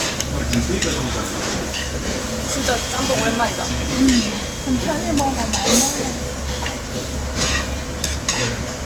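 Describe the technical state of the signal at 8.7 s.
At 8.7 s the sound carries generation loss throughout, likely from about seven Opus passes near 64 kbit/s. It sounds swirly, hollow and smeared, with blurred attacks.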